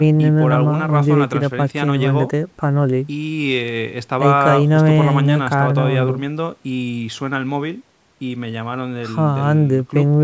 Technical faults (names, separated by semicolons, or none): none